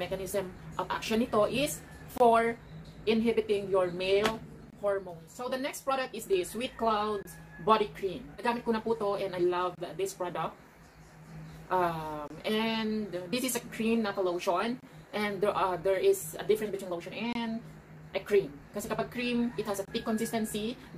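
The audio arrives in 2.5-second chunks, and each join leaves a gap between chunks of about 25 ms of silence, so nothing is lost but the flow is cut every 2.53 s. The holes start at 2.18, 4.70, 7.23, 9.75, 12.28, 14.80, 17.33 and 19.85 s, each ending 25 ms later. They are heard as brief, hard-edged dropouts falling at a steady, regular interval through the sound.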